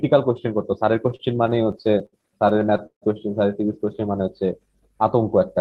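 From 1.09 to 3.04 s, repeated stalls (stutter) break up the speech. 22 times the jitter buffer runs dry. The receiver stretches the last sound to fill each wait, the longest near 150 ms. Nothing is lost, but delivery drags and stutters through the Opus call path.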